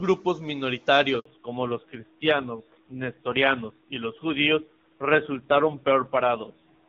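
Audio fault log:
1.19–1.25 s, handover gap: the speech cuts off within a few tens of milliseconds and stays silent for 60 ms before resuming on the new link. Unlike scattered packet loss, there is a single clean hole with no concealment buzz or repeated fragments, and the sound never returns as before. The call was handed from one network to another, and no speech frames arrived while the link was switching.
1.25 s to end, fallback to narrowband: right after the gap, everything above 4 kHz disappears for the rest of the clip. Sibilants lose their hiss and the speech turns dull, boxy and rougher. The HD Voice path before the gap, with faint or no coding damage consistent with AMR-WB at 23.85 kbit/s, gives a direct comparison. The rough texture points to a low-rate narrowband codec such as AMR-NB at 5.9 kbit/s, not a simple low-pass filter.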